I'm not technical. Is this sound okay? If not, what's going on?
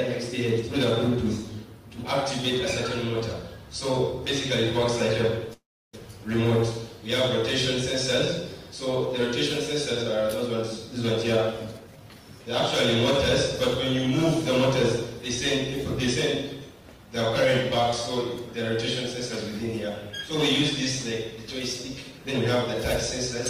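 No, it has two kinds of problem.

Call audio freeze, from 5.53 to 5.95 s: the sound stalls for about four tenths of a second. It was likely caused by pieces of the audio arriving late over the connection. With nothing new to play, the receiver stretched out the last bit of sound, which faded into near silence for roughly 0.29 s. When the late audio arrived, playback resumed where it left off, so nothing is lost, but everything afterwards runs about 0.4 s behind.

Jitter buffer speed-up, from 11.36 to 12.47 s and again from 16.69 to 17.81 s: the receiver had built up a backlog of waiting audio and tried to catch up by quietly snipping out many tiny slices. The pitch stays the same, but the sound plays faster and can feel rushed. The first stretch runs at 120% speed and drops about a fifth of a second. The second is milder, at 106%, and drops well under a tenth of a second.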